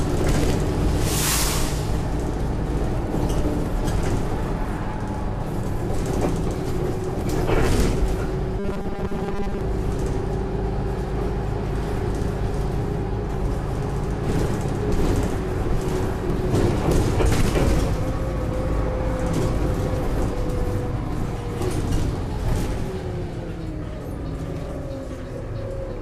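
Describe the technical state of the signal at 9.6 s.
At 9.6 s the sound is at the tail of robotic sound from repeated short buffers, running 8.59 to 9.61 s: a rigid, metallic buzz at 200 Hz. This is likely the last 5 ms being looped while most real audio is skipped. Unlike dropouts, there's no silence, just a fixed-rate buzz that follows the original only roughly.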